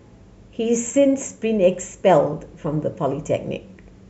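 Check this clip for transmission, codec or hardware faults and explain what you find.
There is one fault, a brief burst of DAB burbling at 1.83 s in the speech. Weak reception let bit errors slip past the error correction into the MP2 audio data at a low error rate, roughly a fifth of a percent. The corrupted samples put short blips of noise into individual sub-bands, and the result, which points to a few damaged frames, is a few watery blips. A spectrogram would show isolated bright blocks confined to narrow frequency bands, and the waveform a small, abrupt glitch.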